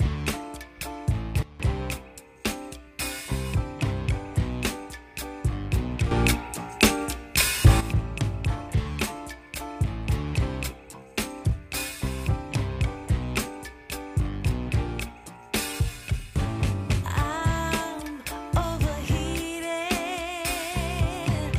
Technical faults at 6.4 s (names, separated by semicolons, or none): sudden gain jump